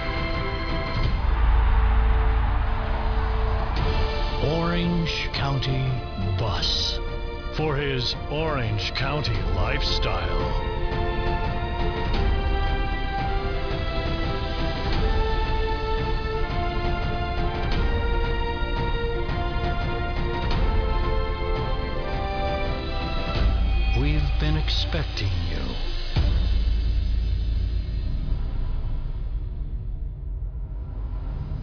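No technical faults are audible anywhere in the recording.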